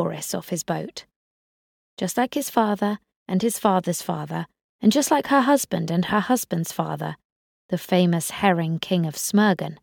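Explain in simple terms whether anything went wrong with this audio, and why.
Nothing went wrong here: no dropouts, clicks, distortion, stutters or other technical faults can be heard anywhere in the recording.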